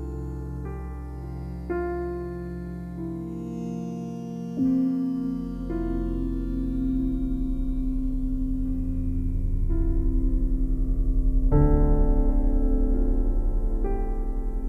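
No technical faults can be heard in this audio; the signal stays continuous and stable throughout, with nothing in it that points to a problem in capture, processing or playback.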